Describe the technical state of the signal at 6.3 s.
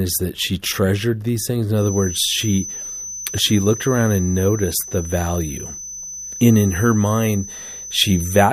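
A loudspeaker-to-microphone loop likely sitting at the edge of oscillation causes a feedback whistle at 6.1 kHz, running from 1.74 s, after "she treasured these things", to the end. It sounds as a thin tone at one steady pitch that swells and fades slowly, about 15 dB beneath the speech.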